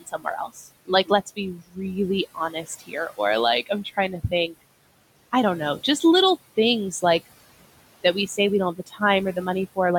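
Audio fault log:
throughout: noise suppressor artifacts. The room noise, about 18 dB below the speech, is pulled down by about 20 dB in the gaps. It lifts again under the speech.
0.00–1.79 s, 2.35–3.19 s, 3.66–4.54 s, 8.75–9.01 s: speech cut by the noise suppressor. The suppressor mistook parts of the speech for noise and turned them down. Drops reach about 20, 15, 12 and 15 dB. Quiet sounds and endings are swallowed, for roughly 0.7 s in the first span and about 0.2 s in each of the others.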